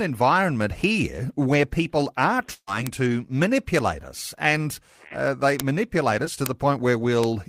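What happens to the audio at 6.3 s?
Right around there, from 6.25 to 6.28 s, there's a short concealed packet loss. About 20 ms of the speech never reached the decoder in time, so the receiver patched the gap by extending the preceding sound before blending back, leaving a quick smear or wobble.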